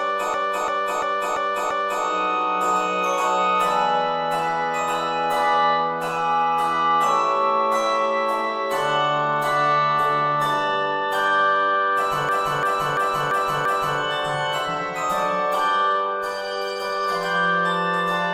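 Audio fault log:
0.34–2.05 s and 12.29–14.00 s, system hang loop: the system stalled twice while the sound hardware kept replaying its ring buffer, so the same 341 ms slice of audio repeats five times each time, a rhythmic stutter at about 2.9 Hz. That length fits a 16384-sample buffer at 48 kHz. Playback then picks up where it stopped, with essentially nothing skipped, so the repeats add time rather than removing any.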